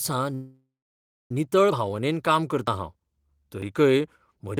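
A speech clip with a call audio freeze from 0.34 to 1.31 s, likely from delayed packets emptying the jitter buffer. The last sound fades into a buzz or hiss and then about 0.62 s of silence, showing on a spectrogram as a smeared band that dies to blank. Speech resumes without loss but nearly a second late. Audio missing between chunks follows at 1.71, 2.67, 3.62 and 4.57 s, with roughly 50 ms skipped at each, likely at one-second chunk boundaries. The waveform shows abrupt joins there.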